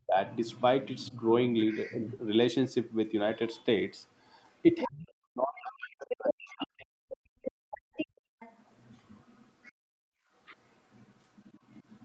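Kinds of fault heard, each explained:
Speech suppressed in double talk: The talker's speech sinks by about 25 dB in a brief dip near 0.1 s, then by as much as about 40 dB for roughly two seconds from 4.83 to 7.11 s, likely because the echo canceller could not tell the talker from the loudspeaker while both were active and pulled everything down. On a waveform the envelope caves in. On a spectrogram the speech harmonics fade into a dark gap.
Other side's voice leaking through: A second, fainter voice runs underneath from 0.31 to 2.18 s at about 20 dB below the talker, rises to about 10 dB below around 4.5 to 4.9 s and from 5.56 to 9.72 s, and returns very faintly, about 30 dB down, from 10.65 s to the end. This is likely residual loudspeaker echo that the canceller did not remove. A spectrogram shows a weaker, independent set of harmonic traces.
Background gated by the echo canceller: The room tone collapses by about 32 dB from 7.39 to 8.39 s and by about 34 dB from 9.72 to 10.3 s, for roughly 0.7 s and 0.5 s, then returns. 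The canceller clamped the microphone while the loudspeaker played. On a waveform the noise floor flattens to near silence. A spectrogram shows the broadband haze below 8 kHz blanking out in sharp-edged rectangles.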